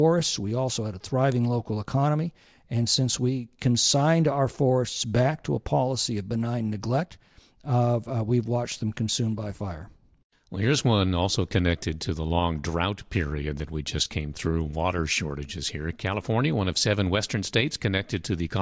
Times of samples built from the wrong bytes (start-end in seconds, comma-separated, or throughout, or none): none